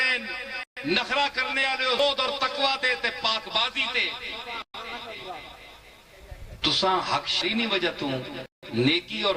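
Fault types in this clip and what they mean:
Clock drift between sender and receiver: the sender's clock runs about 5 percent fast, so the receiver's buffer keeps overfilling and has to shed audio.
Repeated timing corrections: from 0.14 to 9.09 s the receiver keeps trimming short bits to catch up, so the sound runs at 104% pace with small, unevenly spaced skips.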